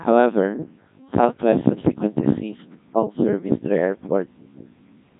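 Codec 2 vocoder coding runs through the whole of this speech clip, from start to finish, and the damage is heavy. The voice has been rebuilt from sine waves driven by pitch, voicing, energy and a coarse spectral envelope, so the original waveform is gone and the speech comes out robotic and buzzy. The mechanical quality points to a low rate around 1.6 kbit/s, and nothing remains above 3.8 kHz.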